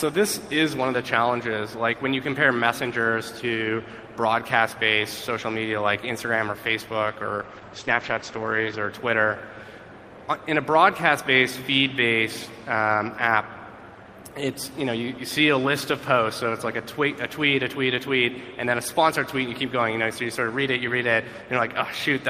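At 7.36 s there's a call bitrate drop lasting until about 8.97 s. The bandwidth estimate fell, so the encoder coded far more coarsely, consistent with going from roughly 32 down to 12 kbps. The top end is cut at 8 kHz, leaving everything muffled and watery until it recovers.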